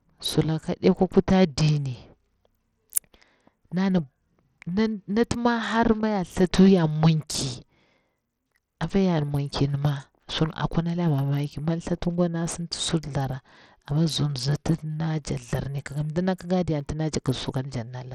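A speech recording carries plainly audible Bluetooth SBC compression damage from start to finish. The treble thins out and flickers on and off while a gritty, granular noise and aliasing ride on the voice, which fits a low bit pool around 80 kbps that is likely starving the upper sub-bands of bits. On a spectrogram the high band looks patchy, with blocks appearing and vanishing frame to frame, and a grainy noise floor fills the gaps.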